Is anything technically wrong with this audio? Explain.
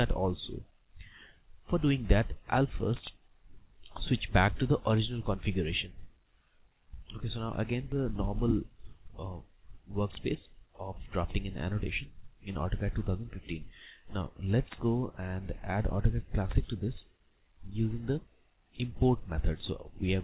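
Yes. At 7.92 s there is a skip ahead: roughly 0.4 s of audio was dropped while later audio was already buffered. Playback jumps straight on with no gap, and the waveform shows an abrupt splice with no silence. The audio stops at 4 kHz, consistent with a G.711 mu-law call codec.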